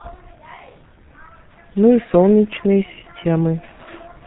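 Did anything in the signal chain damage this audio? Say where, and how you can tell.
Yes, at the codec stage: G.723.1 coding runs throughout this speech. Nothing sits above 3.8 kHz, and a spectrogram shows a flat ceiling there. The coarse, slowly updated voice model leaves the sound heavily muffled and hoarse with smeared consonants, consistent with a roughly 6 kbit/s mode.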